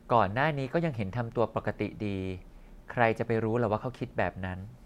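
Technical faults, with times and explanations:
No technical faults can be heard; the speech signal stays continuous and stable across the whole recording.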